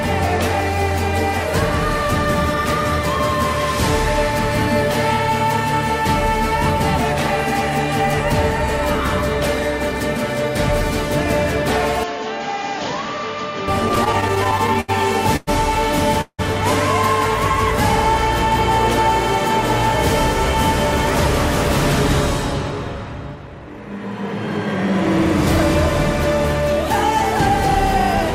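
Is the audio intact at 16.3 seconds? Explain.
No. A call audio freeze runs from 16.21 to 16.41 s, likely from delayed packets draining the jitter buffer. The last sound stretches as a fading buzz or hiss, reaching silence for about 70 ms, then resumes 175 ms late with nothing lost.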